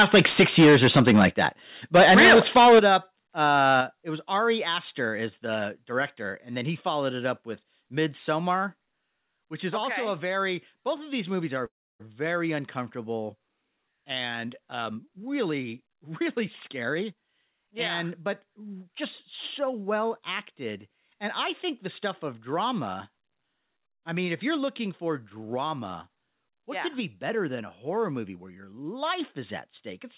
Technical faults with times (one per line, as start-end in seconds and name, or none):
0.00-1.47 microphone overload
1.95-2.96 microphone overload
2.79 microphone volume stepped down
3.41-3.81 microphone overload
3.81 microphone volume stepped down
8.91 microphone volume stepped down
11.66-12.15 call audio freeze
14.78-16.21 jitter buffer speed-up
16.68-17.14 jitter buffer speed-up